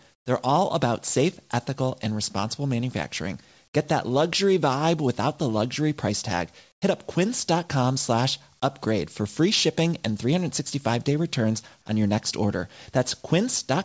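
Right at the start, from 0.14 to 0.26 s, and again from 6.72 to 6.82 s, the room tone drops out and a flat, featureless hiss sits in its place, about 16 dB and then about 15 dB quieter than the real background. That's comfort noise in place of the background, likely from the sender's voice detector halting transmission during the pause while the receiver synthesises filler, and it's all band-limited below 8 kHz like the rest of the call audio.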